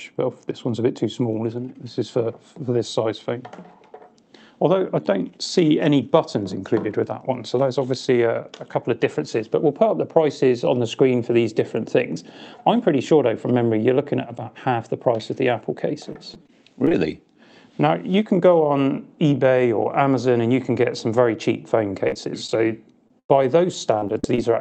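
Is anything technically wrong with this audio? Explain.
Yes. There are three kinds of packet-loss fault, all in the second half, on a call path whose sound stops at about 8 kHz, consistent with Opus coding.

Repeated packet loss (robotic sound) occurs from 16.1 to 17.0 s, 22.08 to 22.58 s, and 23.98 to 24.39 s. Holes of up to 44 ms recur, each patched by extending the preceding sound. That gives a choppy texture with pieces missing. Unlike a single burst, it stutters through the whole stretch.

Short concealed packet loss occurs from 23.08 to 23.11 s. About 20 ms never arrived, and the decoder bridged it by continuing the last sound before blending back. It is heard as a brief smear or wobble, far shorter than the burst that follows.

A burst of packet loss occurs from 23.19 to 23.31 s. About 100 ms went missing in one unbroken block. Concealment holds the last sound and lets it fade, so there is a single buzz or hiss, then the audio jumps ahead. 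There is no repeated chopping.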